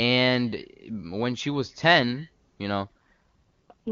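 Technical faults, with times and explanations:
2.84 s to end, AMR rate drop: from 2.84 s the speech turns rough, raspy and synthetic while the bandwidth stays unchanged and no gap appears. This fits the AMR wideband (HD Voice) codec being switched from its 23.85 kbit/s mode to its 6.6 kbit/s mode. At that rate the codec has too few bits to model the pulse excitation and vocal tract shape finely, so the harshness lasts until the clip ends.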